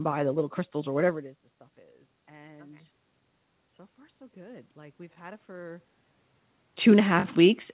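A speech recording carried over a narrowband call path, with nothing above 4 kHz, consistent with G.711 mu-law. From 3.95 to 5.91 s, automatic gain rising is audible: the input dropped by about 22 dB, and the gain control slowly pushed level up about 3 dB, swelling voice and room noise together.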